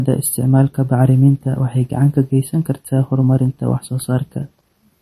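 MP3 compression artefacts run through the whole speech clip, likely from a low-bitrate encode; the damage fits roughly 40 kbps. Nothing sounds above 12.6 kHz, and weak frequency lines starved of bits flicker between frames, giving sibilants a watery, swirling, metallic edge.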